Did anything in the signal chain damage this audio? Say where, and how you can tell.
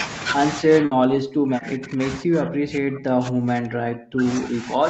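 Yes. At the call processing stage, the echo canceller likely mistook double talk for its own echo. From 0.61 s to the end, the speech is suppressed in double talk: it dips and breaks up, falling by about 40 dB at its deepest.

At the network stage, a burst of packet loss hits from 0.85 to 0.93 s. The receiver's concealment extends the last sound for about 60 ms while fading it. Playback then picks up further on, so about 60 ms of the speech is simply missing.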